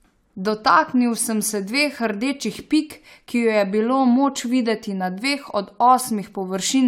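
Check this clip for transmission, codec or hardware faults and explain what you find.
Nothing in the speech points to a transmission, codec or hardware problem, so there is no fault to report.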